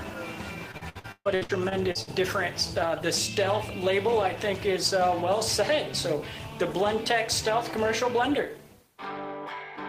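From 0.71 to 2.09 s there's repeated packet loss with that robotic sound: packets kept going missing or arriving late, and each hole got patched by stretching the last bit of audio. It sounds like roughly ten choppy dropouts, the longest about 135 ms, with nearly 40% of the stretch filled in.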